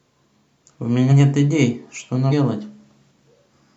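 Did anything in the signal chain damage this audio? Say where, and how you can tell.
Yes. At 1.07 s and again at 2.28 s the speech lurches forward, losing about 100 ms and then about 150 ms. These are compressed frames skipped in decoding. The jumps fit whole 46.4 ms frames, two then three, that were missing or rejected.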